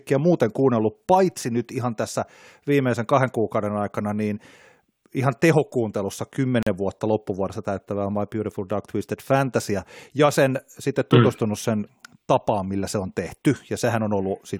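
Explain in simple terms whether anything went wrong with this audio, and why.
At 6.63 s, right after "ihan tehokuuntelussa", the speech briefly drops out for about 40 ms, then resumes with "vuotta loppuvuodessa täyttävää". This is a gap at a join of encoded pieces: two separately compressed sections were stitched together without trimming the silent padding each one carried.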